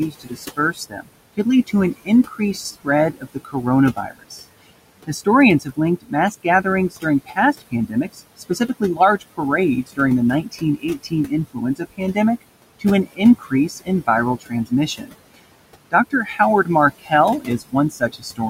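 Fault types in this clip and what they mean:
Noise suppressor artifacts: The suppressor pulls the room noise down by about 20 dB, frame by frame. The leftover noise sinks between phrases and rises under the speech.
Speech cut by the noise suppressor: The suppressor mistakes parts of the speech for noise from 0.1 to 18.4 s. Around four seconds in total sound swallowed, dropping by up to about 22 dB.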